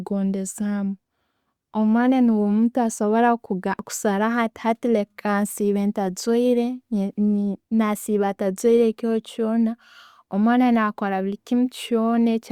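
Speech recording with no audible technical faults.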